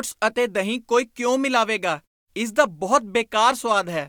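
No technical faults are audible.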